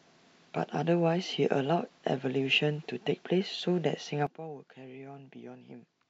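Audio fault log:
4.27 s to the end (6.09 s), sudden gain jump: the speech and its background noise drop together by about 15 dB in a single step, with no fade, and stay down. A digital gain change applied instantly between adjacent samples, without a ramp, is the likely cause.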